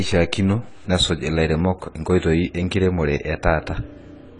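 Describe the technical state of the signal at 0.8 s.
At 0.8 s the speech carries audible codec damage that runs through the whole clip rather than starting or stopping there. Nothing reaches above 10 kHz, so the top octave is missing and the sound is dull, with a smeared, warbling texture on sustained sounds and sibilants. This is likely AAC compression: the encoder quantises each frame's spectrum coarsely and drops high bands to save bits, which points to an AAC-LC stream at about 24 kbps.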